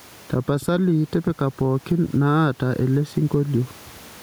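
All the way through there's gain pumping. The room noise sits about 35 dB under the speech, and the gain swings by around ten decibels. The likely cause is the mic gain set far too hot, with a fast limiter or compressor clamping down on each loud syllable, so the speech comes out squashed and flat in level.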